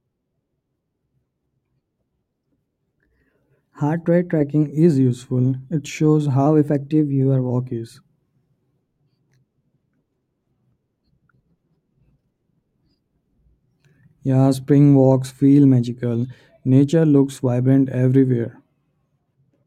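A clock-matching stage likely stepped its playback rate to correct buffer drift, a drift correction step, from 2.27 to 4.63 s and again from 6.46 to 7.51 s. The speech runs 6.24% fast and about 105 cents sharp, roughly a semitone, then snaps back.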